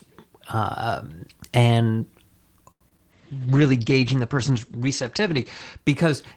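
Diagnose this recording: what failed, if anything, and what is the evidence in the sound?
From 2.71 to 2.83 s the speech hangs on one sound for about 92 ms with a faint buzz or dip, then resumes with nothing skipped. This is a short stall from a late packet: a network packet arrived late, the jitter buffer ran dry, and the receiver stretched the last sound while it waited.

Just after, brief smears appear at 2.89 to 2.93 s and again at 2.97 to 3.00 s. This is short concealed packet loss on the network path. About 40 ms and then 20 ms never reached the decoder, and the receiver bridged each gap with a shorter synthesized continuation before blending back into real audio.

From 3.14 to 5.84 s the speech turns muffled and watery. The top end stops at 8 kHz instead of reaching toward 20 kHz. This is a call bitrate drop at the codec stage. The sound points to the encoder falling from around 32 kbps to about 11 kbps, staying at its lowest for roughly two and a half seconds.

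Inside that stretch, from 3.35 to 3.58 s, the speech drags at the same pitch, running at 87% speed. This is a jitter buffer slow-down. The receiver repeated pitch periods to add 37 ms and rebuild its reserve.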